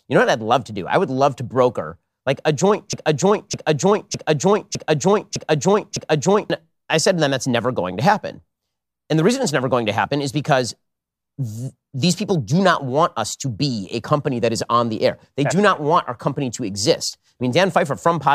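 A broken-record loop runs from 2.93 to 6.50 s in this speech recording, just after "broker like a joint": a 0.61 s fragment repeats six times back to back, likely from a stalled stream resending its last buffer, and the missing audio is lost before "I said to them".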